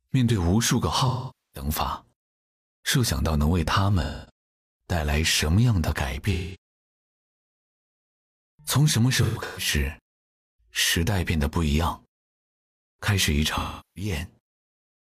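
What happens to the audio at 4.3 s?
At 4.3 s the audio is just coming out of an AAC frame loss with concealment that began at 4.02 s. For about 256 ms, roughly six lost frames, the decoder has no fresh data and rebuilds the sound from the last good spectrum, so the passage turns smeared and noisy before real audio resumes at 4.31 s. Unlike a plain dropout, the sound never cuts to sudden silence.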